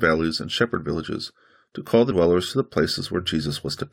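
Damaged data in a compressed stream at 2.10 s in this speech clip, between "villages to call the" and "to the": corrupted frames throw the decoder out of sync, producing a brief blip.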